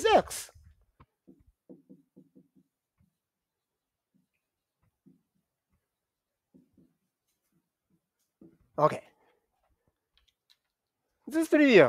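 No technical faults can be heard anywhere in the clip.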